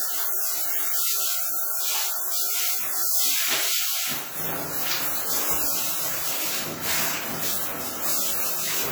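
Throughout the clip the sound rings and washes, with a hiss that breathes along with it, likely from WMA compression at a bitrate that fits about 48 kbps. A spectrogram shows energy smeared across time, gaps where weak lines vanish, and nothing above 20.1 kHz.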